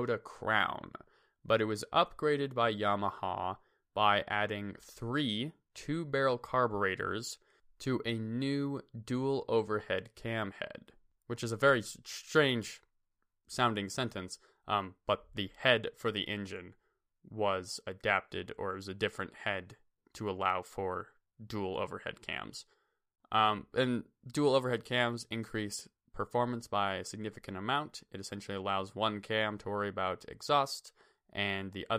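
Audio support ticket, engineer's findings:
No faults found in this speech recording. No working paths are listed, so there are no further findings to report.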